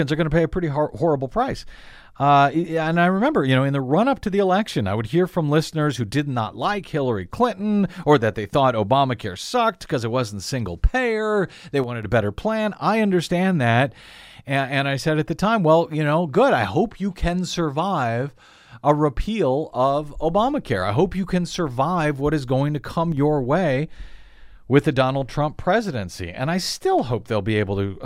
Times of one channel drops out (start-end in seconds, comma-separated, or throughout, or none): 11.84-12.03, 23.12-23.17